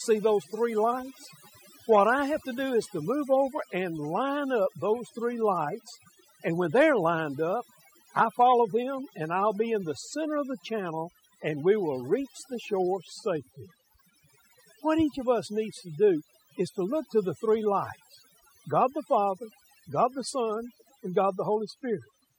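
Speech runs for the whole clip under overdone noise removal. The background in the pauses drops and breaks up into twinkling specks, and the voice loses its quieter detail, pulled down with the noise. That points to a noise reducer set too strong, cutting individual frequency bands whenever they sit close to its noise estimate. Unlike a noise gate, which shuts everything at once, this works band by band, hence the scattered twinkles instead of a clean on-off cut.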